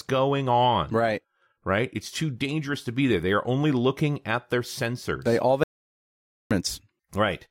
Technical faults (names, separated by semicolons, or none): audio dropout to silence